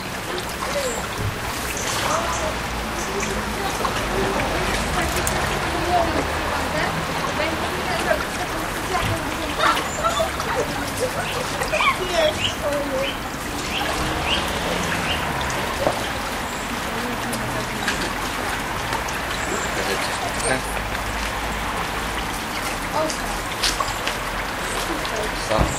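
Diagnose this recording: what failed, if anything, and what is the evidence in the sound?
Nothing failed in this recording.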